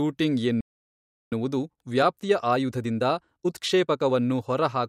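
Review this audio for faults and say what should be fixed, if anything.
A playback stall silences the speech from 0.61 to 1.32 s, about 0.71 s. The likely cause is the player running dry or its thread blocking.

Time-compressed catch-up follows from 1.32 to 4.16 s. Small pieces are cut and cross-faded, so speech runs 1.25 times fast at normal pitch.

To prevent both, give the player a deeper buffer and keep its audio thread unblocked, so it never runs dry and needs no catch-up.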